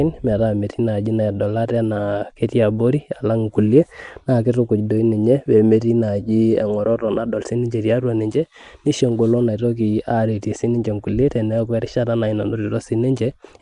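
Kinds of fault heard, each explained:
Nellymoser compression: rough hissy halo and smeared underwater quality, nothing above 10.6 kHz; likely Flash's Nellymoser Asao codec filling bit-starved bands with noise.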